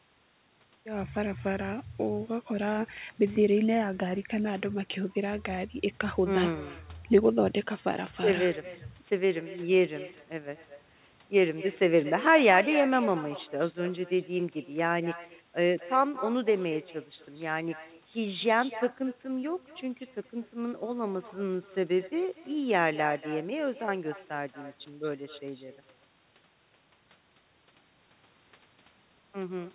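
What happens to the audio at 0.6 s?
At 0.6 s, as everywhere in the clip, there is an echo with no canceller: the far end's loudspeaker leaks into its microphone and returns the speech about a fifth of a second later, about 16 dB quieter. On a spectrogram each syllable has a faint delayed copy trailing it, cut off at 4 kHz like the speech itself by the call path; the waveform shows smaller duplicate bursts after each one.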